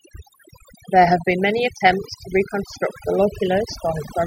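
From start to finish the speech carries overdone noise removal. A noise reduction stage was set far too aggressively, so any frequency band sitting close to its noise estimate gets pulled sharply down or muted outright, and the softer components of the speech are taken along with the noise. Between phrases the background collapses to near silence dotted with twinkling, chirpy specks.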